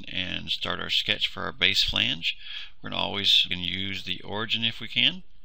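At 3.50 s the sound jumps abruptly ahead with a brief blip, likely a stream segment skipped, where one chunk failed to load and playback resumed from the next. The waveform shows a hard discontinuity, and the spectrogram a thin vertical broadband line.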